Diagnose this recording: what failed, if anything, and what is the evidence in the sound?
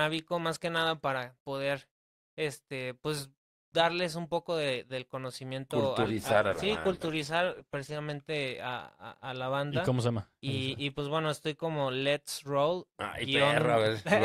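A call bitrate drop, originating in the network and carried out by the codec, runs from 6.04 s to 8.05 s. Over that stretch the audio turns coarse and watery and loses its top end, then clears once the rate recovers. The degradation holds at its worst for roughly 1.9 s. That points to the bandwidth estimate collapsing and the encoder being pushed from around 64 kbps to around 12 kbps, coding more crudely and band-limiting the signal.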